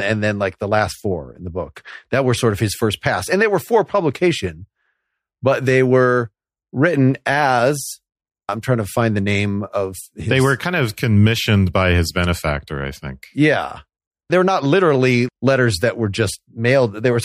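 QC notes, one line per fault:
No faults turn up anywhere in this one, so there's nothing here to log.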